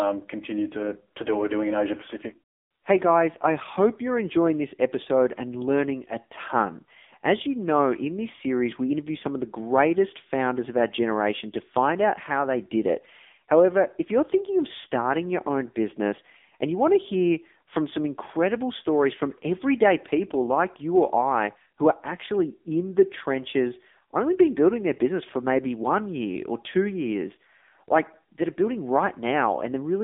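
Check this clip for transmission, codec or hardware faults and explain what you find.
One codec fault runs through the whole recording. AMR narrowband mobile codec damage is present from start to end. The speech sits in a band of roughly 250 Hz to 3.6 kHz, with nothing above 3.7 kHz. The codec models the vocal tract and excites it with a few pulses per 5 ms. Few bits leave little detail, which fits a low mode near 6.7 kbps. The damage is heavy. The voice sounds buzzy, synthetic and boxed-in, like a poor phone line.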